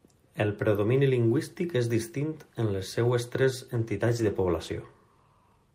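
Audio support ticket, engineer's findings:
Call bitrate drop, 3.74–4.89 s, after "en les seues tres": encoder bitrate cut, consistent with about 40 down to 16 kbps. Coarser Opus coding gives rough, muffled speech, highs missing until recovery.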